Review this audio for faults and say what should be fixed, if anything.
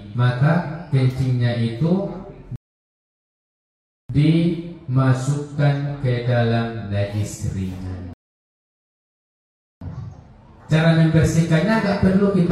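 Two rebuffering stalls show up here, at 2.56 to 4.10 s and again at 8.13 to 9.81 s. In each the sound drops to silence and then picks up exactly where it left off, so nothing goes missing, but the gaps add about 1.5 s and 1.7 s of dead air. That's the player draining its downloaded audio and waiting for more to arrive. Fix it with a bigger playback buffer or a lower-bitrate stream when throughput dips.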